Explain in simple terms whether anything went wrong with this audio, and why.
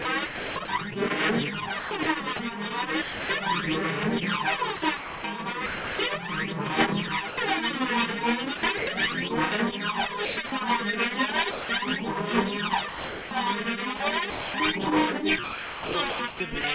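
Parts of the sound drop out and are replaced by artificial background hiss between 0.02 and 3.29 s, 4.76 and 8.87 s, and 10.25 and 16.64 s, where about 0.8 s, 0.9 s and 1.8 s go missing. This is likely sound chopped by the voice detector, which keeps switching sending off and on. Unlike lost packets, which leave brief breaks or glitches, these holes are filled with synthetic comfort noise. The call's phone-quality codec also means nothing above 4 kHz comes through.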